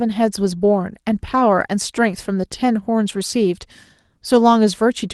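There are no technical faults in this speech clip to describe in time order.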